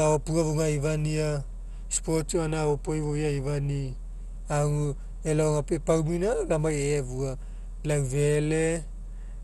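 Throughout the speech there is plainly audible damage from likely MP2 compression. Nothing is heard above about 12.2 kHz. The sound is dull, with a gurgling, grainy roughness. Starved of bits, upper sub-bands drop out and flicker, which fits a rate near 64 kbps.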